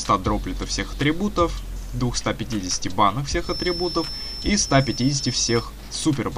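From 3.39 s to 5.69 s a thin, steady whistle at 5.3 kHz sits behind the sound, roughly 10 dB below it and swelling and fading slowly in level, before stopping. This is a feedback whistle. The likely cause is a loudspeaker-to-microphone loop balanced right at the edge of feedback, so that one high frequency keeps recirculating and sustaining itself without building into a runaway howl.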